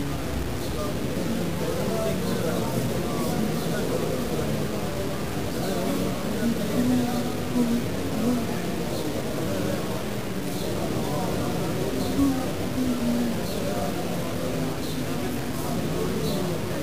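Throughout the audio, a coarse grainy distortion rides on the sound and shifts with it, sitting only around 10 dB below the signal. This is likely low bit depth without dither, about 4 bits, truncated. Unlike dithered reduction's steady hiss, this error tracks the signal.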